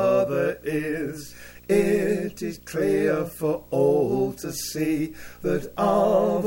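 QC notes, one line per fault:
Throughout, video or display buzz: a buzz at 59.94 Hz, the picture's field rate, carries a hashy edge and sits about 25 dB below the signal, with a thin whine at the 15.7 kHz line rate. A screen or video cable is coupling its scanning energy into the audio path.
Throughout, sample clock jitter: a fine hiss and roughness rides on the louder and brighter moments and drops away in silence. The converter clock wanders by around half a microsecond, so samples land early or late, and steep waveform slopes turn that timing error into noise about 50 dB down.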